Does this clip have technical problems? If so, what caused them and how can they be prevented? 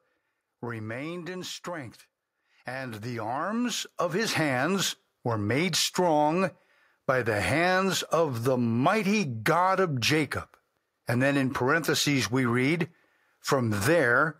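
Yes. From 0.52 to 1.34 s, automatic gain falling: the gain control judged the input too loud and eased its gain down by about 3 dB, so the speech and its background sink together over under a second. Setting a sensible fixed input level prevents this.

From 1.64 to 5.54 s, automatic gain rising: the control judged the input too quiet and raised its gain by about 11 dB, so speech and background swell together over several seconds, settling just before "strong by the hands". Disabling automatic gain and fixing the level avoids it.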